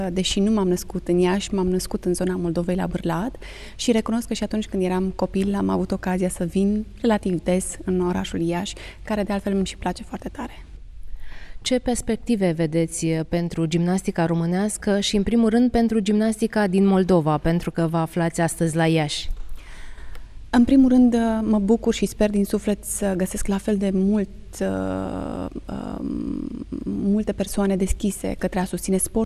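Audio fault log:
Nothing stood out on listening to this clip.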